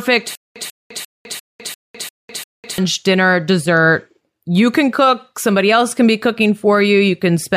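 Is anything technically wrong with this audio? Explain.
Yes. Stutter with silent gaps runs from 0.35 to 2.78 s, ending just before "dinner dessert". The likely cause is a stalled player or stream that replays its last buffered fragment on each retry, then runs dry. A 143 ms burst of speech repeats 7 times, each followed by about 204 ms of dead digital silence, giving an even 347 ms stutter. The speech that belonged in that stretch is missing.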